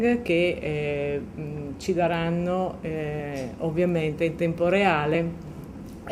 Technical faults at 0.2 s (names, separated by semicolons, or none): none